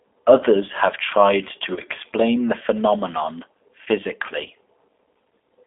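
Throughout, the speech carries G.729 codec damage, plainly audible as a rough, synthetic edge. Nothing passes above 3.5 kHz, which fits an 8 kbit/s line. At 1.74 to 1.82 s, after "have tried to", VoIP packet loss concealed by the speech codec stretches about 30 ms into a fading buzzy tone or coloured noise. At 3.84 to 3.88 s, after "the phenomenon", a 20 ms loss repeats this.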